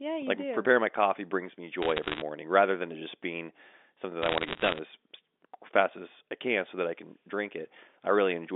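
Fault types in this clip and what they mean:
Bit errors on a digital phone line: flipped bits each spoil one sample, so you hear short bursts of sharp ticks and crackle after "my coffee brings me" and "just being something that".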